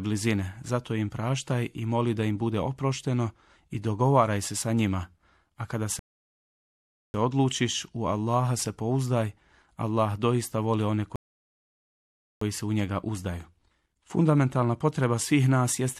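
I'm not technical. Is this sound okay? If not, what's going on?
No. The speech twice goes silent and then carries on from exactly where it stopped: from 5.99 to 7.14 s, just before "odlučiš u", and from 11.16 to 12.41 s, between "doista voli one" and "se u njega uzdaju". Each is a rebuffering stall. The player ran out of downloaded audio and waited about a second for more. Nothing is missing, but each stall adds silence.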